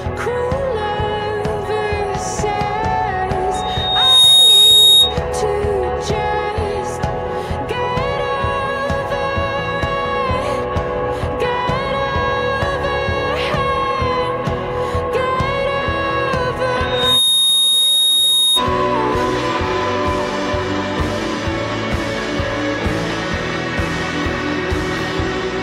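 Loudspeaker feedback squeal howls from 3.54 to 5.19 s and again from 16.83 to 18.64 s. The microphone re-amplifies its own loudspeaker until a 3.7 kHz tone runs away, swelling within a second, louder the first time. A spectrogram shows a bright horizontal line at 3.7 kHz, and the waveform shows a swelling envelope.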